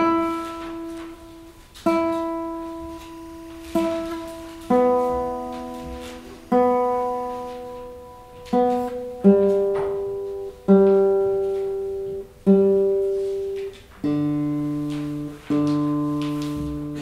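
From 2.89 to 7.53 s, timecode bleed leaks neighbouring linear timecode into the audio, adding a low, steady chirping warble near 1 and 2 kHz.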